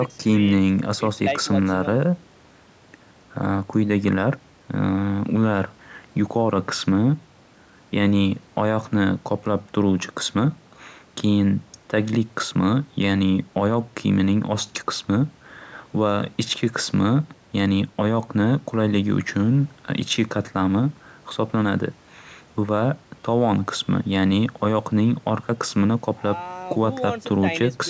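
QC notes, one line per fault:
Nothing stood out on listening; the only shaping heard is the usual call microphone processing, which trims the lowest bass and leaves nothing above 8 kHz.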